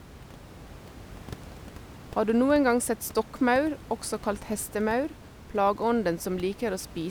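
Nothing technically wrong turns up in this bit of speech, just some room noise sitting about 19 dB under it, which belongs to the space the microphone was in rather than to the system.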